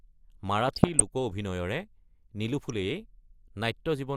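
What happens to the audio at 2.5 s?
DAB burbling runs from 2.48 to 2.7 s. Weak reception lets bit errors slip past the error correction and reach the MP2 audio data, at a rate of a fraction of a percent. Corrupted samples then put short blips of noise in single sub-bands, and corrupted scale factors make sub-bands jump in level for up to a frame. The damage hits 13 frames, heard as burbling over the speech.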